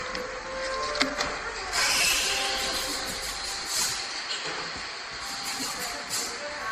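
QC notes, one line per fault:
Throughout, generation loss. The sound is swirly, smeared and hollow, with blurred attacks and nothing above 15.2 kHz. The damage is heavier than a single low-bitrate encode would leave. The likely cause is repeated MP3 decoding and re-encoding, around ten passes, at a rate that fits 64 kbit/s. Each pass quantises again on a shifted frame grid. Noise and spectral gaps pile up and transients spread in time.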